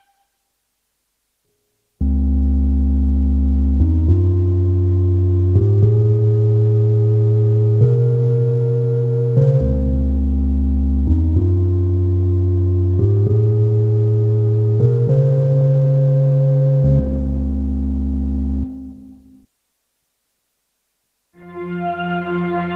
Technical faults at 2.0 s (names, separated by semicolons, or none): none